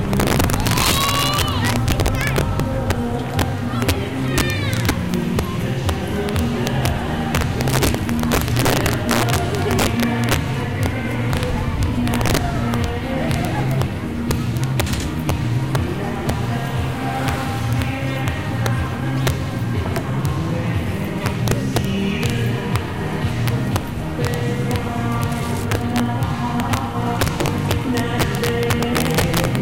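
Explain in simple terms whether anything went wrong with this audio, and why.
Something did go wrong, and it runs through the whole recording: integer overflow. The level was pushed about twice as hot as the system could hold, and instead of being capped, the loudest moments wrapped around to the opposite extreme. Only a small fraction of the sound, under one percent, crosses that line, but each time it does you get a harsh, violent crack on the loud bits, much nastier than ordinary clipping.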